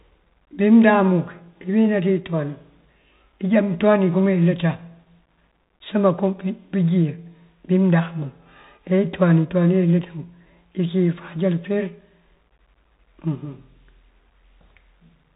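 Speech runs through a Bluetooth CVSD headset codec for the whole clip. Nothing above 4 kHz survives. The one-bit coder's adaptive step lags on loud high sounds, so s sounds turn scratchy over a granular hiss. This fits a 64 kbps CVSD link.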